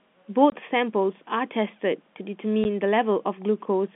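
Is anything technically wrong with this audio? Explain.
Yes. The speech has two abrupt dropouts, from 0.50 to 0.52 s and at 2.64 s, where the sound cuts to dead silence. This is packet loss filled with silence. Audio sent in packets lost some of them, and the receiver played silence for the missing stretch instead of concealing it. The gaps of 20 ms and 10 ms fit 10 ms packets. The band-limited G.711 telephone coding is heard around them.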